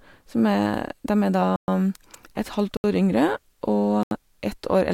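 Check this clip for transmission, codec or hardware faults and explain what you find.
The speech has three blocks of digital silence, at 1.56–1.68 s (120 ms), 2.77–2.84 s (72 ms) and 4.03–4.11 s (80 ms). Each time, output samples were zeroed, likely because the buffer wasn't filled in time. The sound drops abruptly to dead silence. That hard, fadeless cut to silence sets it apart from concealed packet loss, which smears or repeats sound.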